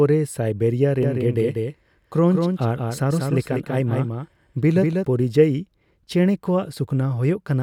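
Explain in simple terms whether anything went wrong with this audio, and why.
From about 1.03 s to 5.05 s the speech has a doubled audio track: a second, somewhat quieter copy of the same speech trails the original by roughly a fifth of a second. It sounds like a hard, clean echo with no room sound, and it switches on and off abruptly at those times. The likely cause is the same signal being picked up twice, once through a slower path, or an edit leaving two misaligned copies stacked together.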